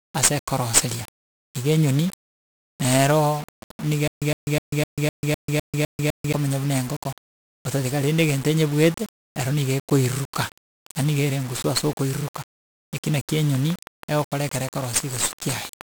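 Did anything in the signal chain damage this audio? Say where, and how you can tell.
Yes. At the codec stage, 1-bit DFPWM compression leaves heavy fuzzy, crackly broadband noise and buried treble throughout, which fits a 48 kbps stream.

At playback, a stutter with silent gaps runs from 4.08 to 6.33 s: a 112 ms fragment repeats nine times, every 253 ms, with 141 ms of silence between, before "buna engoko otatiga rende". This is likely a stalled player or stream replaying its last fragment.

A train of clicks follows "ase okoiruruka eki naki", from 13.55 to 15.82 s. About fifteen similar clicks arrive regularly at 6.2 per second, a few dB above the speech, likely from interference in the analogue wiring.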